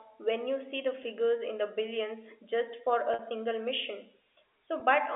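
Packet loss with pitch repetition strikes at 1.03 s, from 3.14 to 3.19 s, and at 4.8 s. The receiver bridged each gap by repeating the last pitch period. The 10 ms losses make a faint buzzy hold, while the 50 ms gap sustains longer and fades out before speech resumes.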